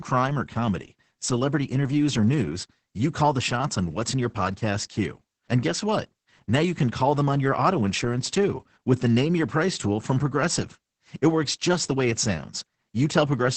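Throughout, heavy Opus voice compression: nothing above 8.7 kHz, coarse SILK-style excitation coding fitting roughly 10 kbps, leaving speech muffled, hoarse and slightly robotic.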